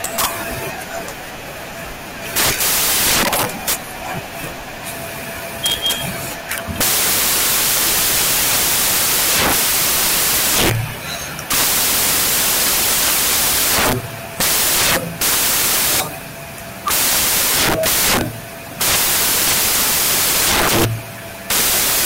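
From start to finish the speech is buried under samples built from the wrong bytes: the reader assembles each sample with its bytes misplaced, so the rapidly fluctuating low-order bits end up as the dominant part of every value. The result is a loud, dense white-noise roar. Unlike added background hiss, the noise comes from every sample value itself rather than sitting separately underneath the speech.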